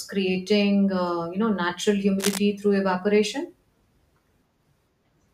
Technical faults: cable scratch noise

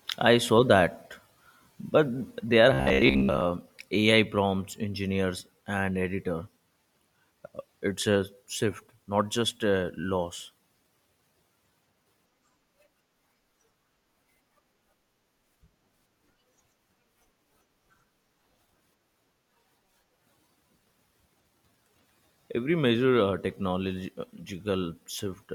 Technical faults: robotic sound from repeated short buffers

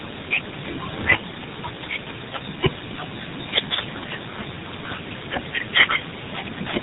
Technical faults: tandem speech coding

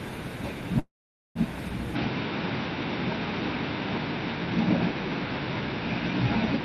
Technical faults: call audio freeze; input switched to a poorer device

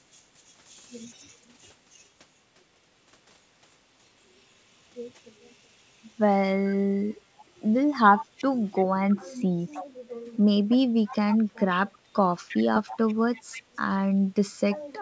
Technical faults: echo leak

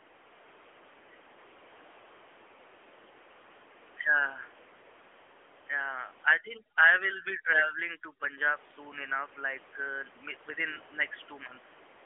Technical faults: AMR narrowband mobile codec; overdone noise removal

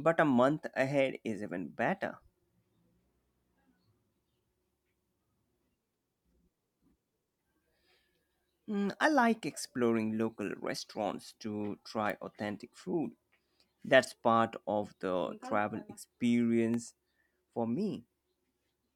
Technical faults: electrical switching spike

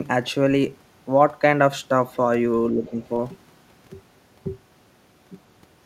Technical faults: speech suppressed in double talk; other side's voice leaking through

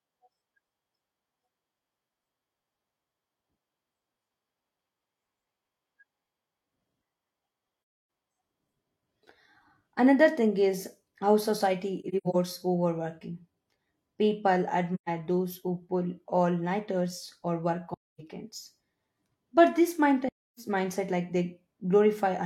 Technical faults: AAC frame loss with muting

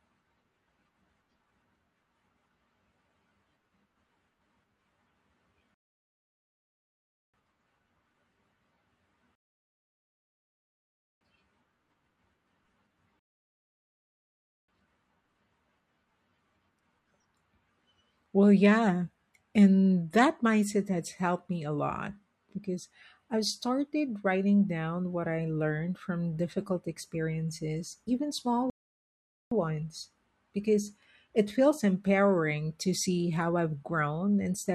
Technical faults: rebuffering stall

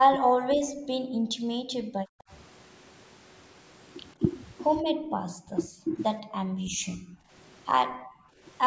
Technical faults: speech suppressed in double talk; background gated by the echo canceller

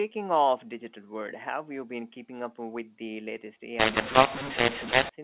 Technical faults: mu-law and A-law mixed up

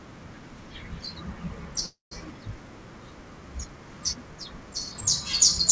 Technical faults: call audio freeze

